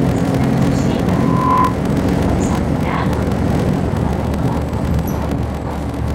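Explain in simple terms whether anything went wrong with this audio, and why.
A block size mismatch (padded) runs throughout: each block ends in a short silent gap, causing a 43 Hz buzz and playback about 14% slow, at roughly normal pitch, consistent with a 1024-sample read.

A loudspeaker feedback squeal occurs from 1.08 to 1.80 s: a microphone picks up its own loudspeaker, and a 1 kHz tone swells within half a second into a squeal.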